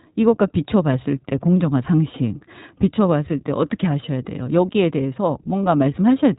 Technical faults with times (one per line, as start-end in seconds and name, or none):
0.00-6.39 iLBC codec